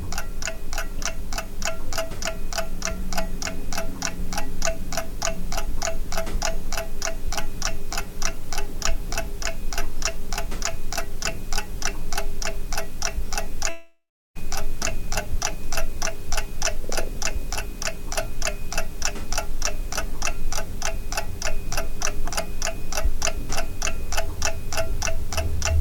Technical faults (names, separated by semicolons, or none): long network dropout